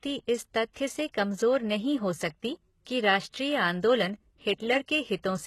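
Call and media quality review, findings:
Gritty, metallic treble throughout, sibilants lispy, nothing above 12.3 kHz. Likely HE-AAC compression: upper band rebuilt by spectral band replication from copied lower bands, harmonics misaligned across crossover. Heavy damage fits a low bitrate near 16 kbps.

Short hiss 0.73–0.76 s, about 24 ms, smearing the attack just before "से कमजोर नहीं हो". Pre-echo from the transform codec: quantisation noise sized for the loud onset spread across its block into the quiet lead-in.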